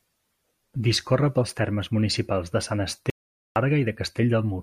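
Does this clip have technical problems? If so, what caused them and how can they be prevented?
Yes. The input feed was likely lost for a moment, from a loose connection, a failed link or a stray mute, while the recorder kept writing silence. This audio dropout to silence runs from 3.10 to 3.56 s. The speech cuts out mid-flow into silence with no room tone, and about 460 ms of speech is gone. Securing cables and connectors, using a stable link and locking mute controls while recording would prevent it.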